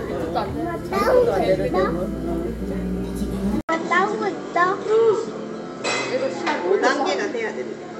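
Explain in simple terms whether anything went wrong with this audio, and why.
At 3.61 s, after a brief 80 ms gap, the sound turns dull, losing everything above 8 kHz, with new background noise. The likely cause is an input switched to a poorer device.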